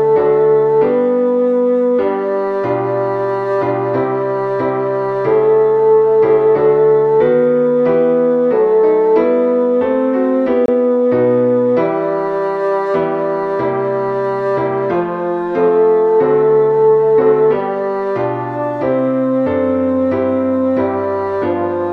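At 10.66 s there's a digital broadcast dropout. The sound just cuts to silence and comes back at 10.69 s, a hole of about 24 ms, which fits a single frame that either never arrived or failed its checksum. The receiver mutes rather than play damaged data, so whatever was sent in that gap is simply gone.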